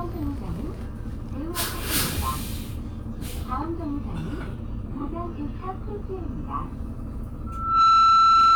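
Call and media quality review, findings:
Loudspeaker feedback squeal from 7.46 s to the end of the clip. A single tone at 1.3 kHz swells over roughly 0.4 s and settles at around 15 dB above the rest of the audio. The probable component is the mic-to-speaker path, where the mic hears its own loudspeaker and loop gain at 1.3 kHz tops unity. Check speaker placement, mic gain and any feedback suppressor.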